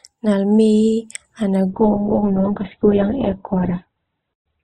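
An adaptive stream dropping to a lower bitrate degrades this speech clip from 1.7 s to the end. At that point the quality changes abruptly with no gap: everything above 4 kHz vanishes and the remaining sound turns thin. This fits a player switching from a rendition near 64 kbit/s to one around 8 kbit/s after the connection slowed, the heavier coding squeezing out treble and adding codec artefacts.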